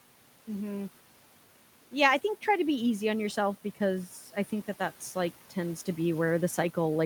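Between 4.08 and 4.51 s the noise suppressor cuts into the speech: it mistakes quieter parts of the sound for background and pulls them down with the room noise, which sits about 21 dB under the speech. Scattered moments totalling around 150 ms dip by up to about 8 dB, so endings and soft consonants sound swallowed rather than missing. Unlike a dropout, the sound never falls to silence.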